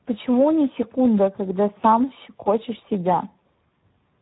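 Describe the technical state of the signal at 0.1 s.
At 0.1 s the speech sits inside Speex codec damage across the whole clip: a starved CELP excitation, which fits a bitrate around 8 kbps, leaves it hoarse and noisy, with nothing above 3.9 kHz.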